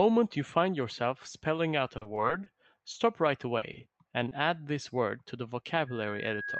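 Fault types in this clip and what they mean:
Repeated packet loss (robotic sound): Audio packets keep dropping, and each hole is patched by stretching the previous sound. Speech turns choppy and robotic at 1.97–2.48 s and 3.58–4.33 s.
Short concealed packet loss: About 20 ms of audio never arrived at 2.92–2.96 s. The decoder bridged it from the preceding sound, leaving a brief smear in the speech.
Loudspeaker feedback squeal: A microphone picks up its own loudspeaker, and one frequency runs away. A 1.6 kHz tone swells from 5.87 s to the end, reaching roughly speech level.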